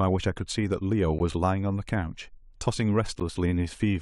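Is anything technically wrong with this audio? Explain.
Yes. There is a gap between stream segments, heard twice, at 1.19 s and 3.20 s. The two holes sit about 2 seconds apart, which fits segments 2 seconds long. At each join, the time stamps leave a short space that the player fills with silence. The first hole lasts about 14 ms and the second about 12 ms. Each one cuts the speech abruptly, with hard edges. Nothing is missing, though; the speech is just pushed later.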